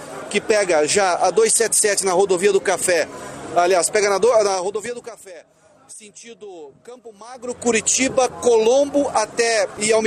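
A gain change applied in coarse 2 dB steps with no smoothing between them causes zipper noise twice: from 4.44 to 5.29 s the level drops by about 20 dB at roughly fifteen steps a second, and from 7.25 to 7.68 s it climbs back by about 20 dB at around thirty steps a second. Each jump puts a small click into the waveform, so a ticking, zipping texture rides on the sound during both moves.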